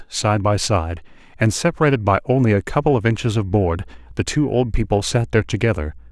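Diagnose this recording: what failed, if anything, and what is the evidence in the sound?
What failed here is in the analogue wiring: there's mains hum coming in at about 2.74 s and sitting under the speech right to the end. It's a steady 60 Hz drone, roughly 25 dB below the speech. Since it switches on partway through rather than being there from the start, I'd suspect a ground loop forming when something got plugged in or moved, letting the power line bleed into the signal path.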